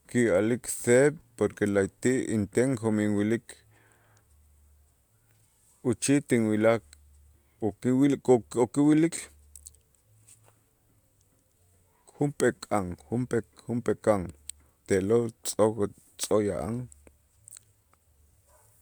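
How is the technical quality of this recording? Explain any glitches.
The recording's signal holds steady and continuous throughout, with no audible technical glitches anywhere in it.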